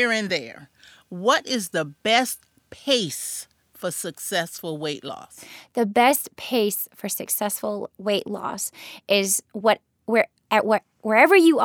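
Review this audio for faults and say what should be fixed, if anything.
Nothing stood out on listening to the speech, so there is nothing to fix.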